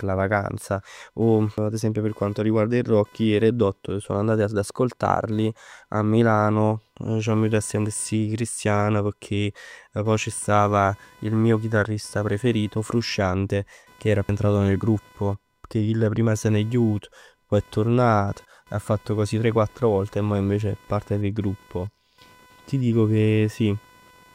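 Processor, graphics or mouse load is disturbing the audio circuit's shared ground for the whole clip, producing computer activity noise: a faint buzzing chirp pulsing at around 500 Hz, well below the speech and rising and falling with the machine's activity rather than with the talking.

At 1.58 s and again at 14.29 s, damaged data in the compressed stream makes the decoder misread a frame and hunt for the next valid header. Each time, a brief chirp or blip cuts through.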